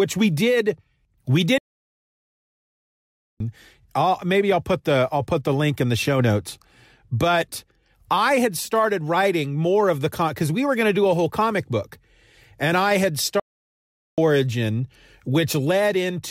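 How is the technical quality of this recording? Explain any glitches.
The speech is interrupted twice by a playback stall. The player likely ran short of data or had its thread blocked, so output fell silent: from 1.58 to 3.40 s (1.82 s) after "we did we", resuming at "I'll maybe I'll put", and from 13.40 to 14.18 s (0.78 s) after "I had".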